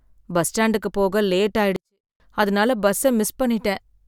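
A 24-bit alignment error (too quiet) runs from 1.76 to 2.20 s: 24-bit samples sitting in 32-bit words are read as full-scale 32-bit, so the speech stays clean but drops about 48 dB, nearly inaudible.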